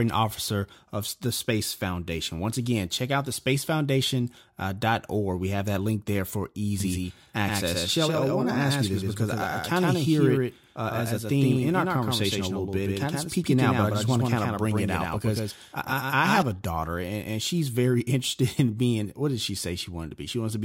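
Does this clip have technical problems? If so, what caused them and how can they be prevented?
Yes. From 6.80 s, right after "that link there for", until 16.42 s, just before "a daughter and and", there is a doubled audio track. A second full-band copy of the speech trails the original by roughly a tenth of a second, about 5 dB quieter, giving a slapback echo with no decay or room colour, and it starts and stops abruptly. The likely cause is the same signal being captured twice, once through a slower monitoring or software path. Route each source through a single capture path and mute any duplicate input or loopback before recording.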